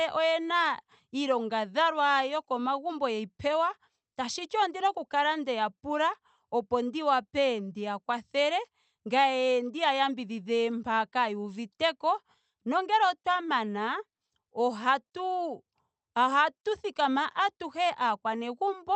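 No technical faults can be heard anywhere in the speech. It has passed through a working call path, and its top end stops at about 8 kHz, which fits an Opus codec running at a moderate bitrate of around 32 kbps.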